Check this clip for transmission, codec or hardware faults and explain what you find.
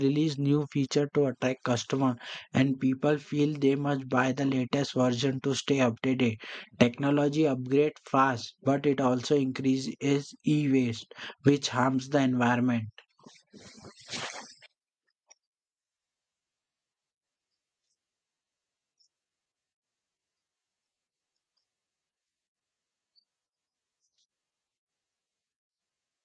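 No transmission, codec or hardware faults can be heard in this speech clip. Nothing in it calls for a fault explanation.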